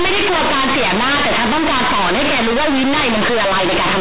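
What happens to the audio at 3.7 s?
At 3.7 s the speech is harsh, loud and buzzy, with quiet passages blown up to nearly the level of loud ones and heavy noise filling the gaps, and this continues for the whole clip. It is companded audio read as linear: A-law bytes from the telephone coding are played back as plain linear 8-bit samples without expansion, so every sign change swings the waveform across about half its range and badly distorts it.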